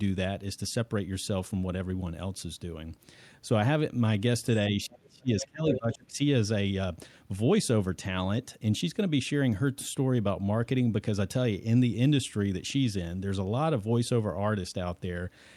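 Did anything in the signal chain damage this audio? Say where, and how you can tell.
Yes. Between 4.86 and 6.2 s the talker's speech is pulled down in gain, dipping by roughly 25 dB at its deepest, with about a second affected in total. This is speech suppressed in double talk, and the stage is call processing: the echo canceller likely mistook overlapping far-end sound for echo and attenuated everything. On a waveform the envelope sags abruptly. A spectrogram shows the talker's harmonics fading or thinning.

Within that same stretch the other side's voice is leaking through in three bursts: 4.93 to 4.98 s, about 30 dB below the talker; 5.4 to 5.46 s, about 15 dB down; and 5.73 to 5.96 s, only about 5 dB down. The likely cause is incomplete echo cancellation of loudspeaker playback reaching the microphone. On a spectrogram these appear as separate short harmonic fragments sitting under the talker's.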